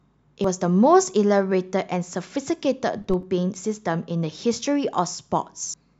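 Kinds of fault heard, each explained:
Compressed frames skipped: at 0.44 s and again from 5.64 to 5.74 s, whole frames of the encoded speech never reach the output, so the audio leaps forward, by roughly a tenth of a second the first time and about a fifth of a second the second time.
Corrupt FLAC frame: from 2.98 to 3.23 s, flipped bits inside the lossless stream throw off the decoder's prediction, which keeps building on wrong values, at worst until the damaged frame ends. The harm spreads across what sounds like three consecutive frames, producing errors peaking around -22 dBFS, and the speech returns clean as soon as an intact frame begins.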